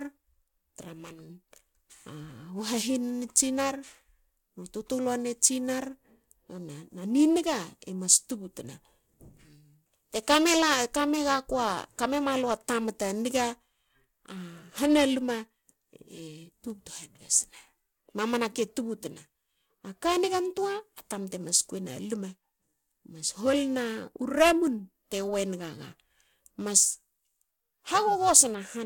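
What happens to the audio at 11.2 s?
At 11.2 s the speech carries periodic clock jitter, which runs through the whole recording rather than starting there. Interference is wobbling the converter's sampling clock at around 700 Hz, so every component of the speech picks up sidebands spaced that far above and below it, strongest on high-frequency content. The result is a rough, metallic edge riding on the sound. Unlike hum or a steady tone, it disappears completely in pauses.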